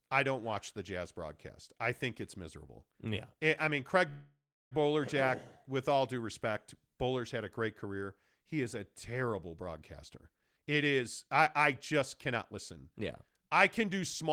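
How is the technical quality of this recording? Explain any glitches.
The recording has two clear glitches, both typical of network call audio.

At 4.09 s, right after "eh I mean", the sound stops and a fading buzz fills the gap, ending in about 320 ms of silence before speech resumes at 4.73 s. Nothing is lost, but 620 ms of delay is added. This is likely a call audio freeze: late packets emptied the jitter buffer and the receiver stretched the last sound until they arrived.

From 10.30 s, after "is a terrible broadcaster", to 14.31 s, the speech sounds hurried, running at about 113% speed with unchanged pitch. This is a jitter buffer speed-up. The buffer had built up too much delay, so the receiver repeatedly cut tiny pitch-period slices, removing about half a second in total.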